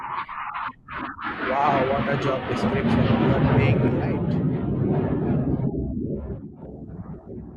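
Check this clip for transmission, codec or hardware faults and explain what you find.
One fault is present: a sudden gain jump. At 3.88 s the level drops by about 6 dB in a single step and stays there until 6.62 s, when it returns just as abruptly. The speech and the background noise fall and recover together, which shows the change is applied to the whole signal rather than to the source. The likely cause is a digital gain setting or bit shift applied instantly, with no ramp between the two levels.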